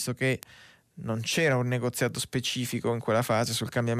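Three bit error spikes interrupt the speech. Each is a flipped bit that throws one or a few samples to a wrong value, off by a power of two, before they snap back. The first, at 0.43 s, hits a single sample at about -9 dBFS and gives the loudest tick. At 1.32 s, after "che non", two samples reach about -33 dBFS. At 2.33 s, after "un negoziato", three samples peak near -27 dBFS. Each is a brief, broadband click unrelated to the voice.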